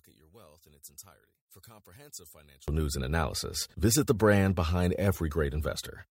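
From the start to 2.68 s, one channel is likely inverted: one side of the stereo pair carries reversed polarity, so when the two are summed to mono, everything common to both cancels. The centred speech drops by about 25 dB, leaving only a faint residue of the difference between channels. Full level returns at 2.68 s, just before "news and analysis visit".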